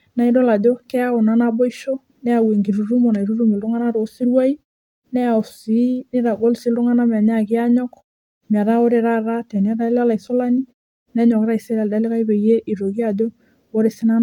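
No technical faults are audible.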